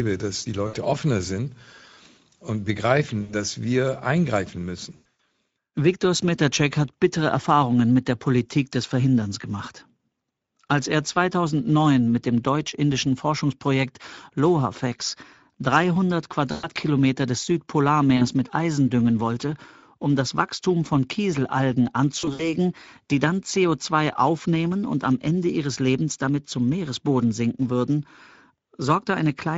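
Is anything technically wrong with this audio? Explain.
Yes. The speech has two faults: a low-rate Speex codec throughout, and six bursts of VoIP packet loss concealed by the speech codec.

Speex codec: The encoder runs at a rate consistent with about 17 kbps, which leaves too few bits to model the excitation. As a result, the speech sounds plainly hoarse and noisy, and the upper band is a shaped noise fill rather than real detail.

VoIP packet loss concealed by the speech codec: Packets dropped and the decoder extrapolated from its last pitch and filter with falling gain. This happens at 0.67–0.76 s, at 3.21–3.34 s just before "dass wir eingreifen", and at 4.95–5.19 s right after "dass wir eingreifen", where the losses are scattered with gaps of up to 100 ms. Further bursts fall at 16.51–16.68 s and 18.17–18.27 s. The last is at 22.19–22.54 s before "die dann", with scattered gaps of up to 60 ms. 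Each burst smears into a fading buzzy tone or coloured noise, and the speech stays weak briefly after it.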